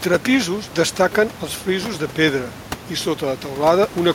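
No technical faults occur anywhere in this speech clip. A steady background of room noise sits about 14 dB below the speech. It belongs to the space where the microphone was placed rather than to any fault in the system.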